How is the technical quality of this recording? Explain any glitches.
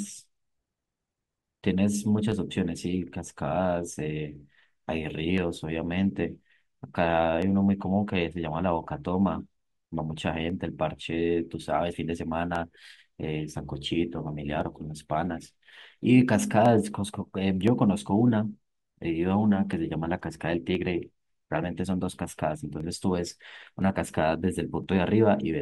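The recording has one recurring fault. From 0.28 to 24.84 s, regular ticks occur every 1.02 s during the speech: periodic USB or driver dropouts, where a blocked bus skips about half a millisecond of audio, around thirty times.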